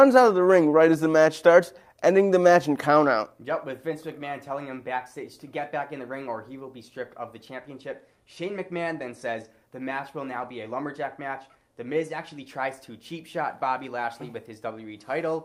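Nothing in the audio stood out as a technical fault on listening.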